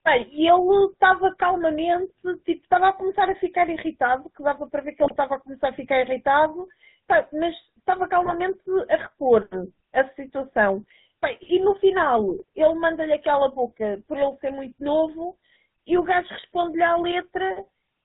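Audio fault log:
Throughout: GSM full-rate codec. The speech has that familiar buzzy, gravelly edge, and it's plainly audible. The codec rebuilds the voice from a vocal-tract filter fed with evenly spaced pulses, keeping only every third excitation sample, so the fine texture of the voice gets replaced by a coarse, rasping one. Nothing above 4 kHz makes it through, which leaves everything dull and boxy. It all fits a 13 kbps full-rate stream.
5.04–5.17 s, 8.25–8.36 s, 12.29–12.44 s: GSM bit errors. Three short bursts, each about a tenth of a second or a bit more, where the speech suddenly squawks, pops and gargles before settling back. Corrupted bits are landing in the decoder's filter, pitch and gain values, so for several frames in a row the spectrum warps or the level jumps. The sound points to a weak link running at roughly a 2% error rate.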